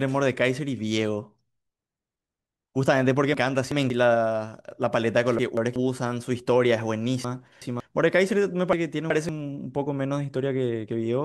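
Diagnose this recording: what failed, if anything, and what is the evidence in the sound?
What failed is chunks out of order, somewhere in the buffering or network path. The speech jumbles at 3.34–3.90, 5.39–5.76, 7.25–7.80 and 8.73–9.29 s. A roughly 186 ms chunk plays one or two slots late, so nothing's missing, but you get three hard joins each time.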